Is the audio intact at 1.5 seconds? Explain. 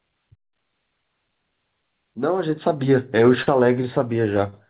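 Yes, the audio is intact at 1.5 seconds, with no fault at that moment.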